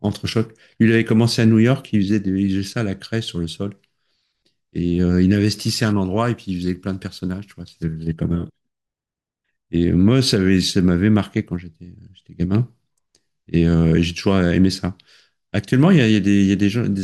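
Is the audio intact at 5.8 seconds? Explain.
Yes, at 5.8 s the speech plays through intact, with no dropout, click, distortion or other fault at that moment.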